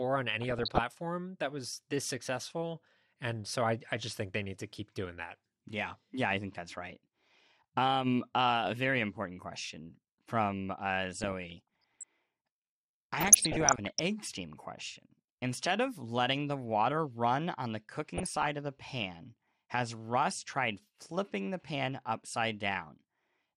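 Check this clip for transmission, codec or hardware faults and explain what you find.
The speech has two faults: a dull, granular coding sound throughout, and four short bursts of burbling.

MP2 compression runs through the whole recording. The speech sounds dull and gurgly, with a granular roughness. The likely cause is MPEG Layer II coding at a low rate, consistent with roughly 80 kbps. At that rate there are too few bits for the 32 sub-bands, so upper bands drop out and flicker, and the remaining ones are quantised coarsely enough to be plainly audible.

DAB burbling appears at 0.41–0.79 s, 11.22–12.03 s, 13.14–13.99 s and 18.14–18.46 s. Each burst adds a burbling disturbance over the speech. The mechanism is reception errors slipping past error correction into the MP2 stream. Corrupted samples put short blips of noise into single sub-bands, and corrupted scale factors make sub-bands leap in level for up to a frame, across 16, 35, 36 and 15 frames respectively. 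The error rate behind this is well under one percent.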